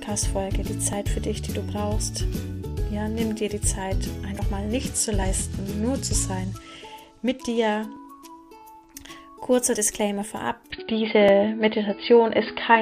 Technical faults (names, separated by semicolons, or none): dropped buffer (overrun); Bluetooth SBC bit pool drop; input switched to a poorer device